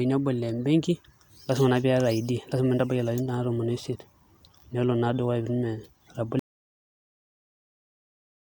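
Speech runs normally until 6.39 s, then suffers an audio dropout to silence lasting to the end: the sound stops mid-flow into silence, with no room tone. Unlike a fade or noise gate, nothing tapers, so a disconnected input is likely.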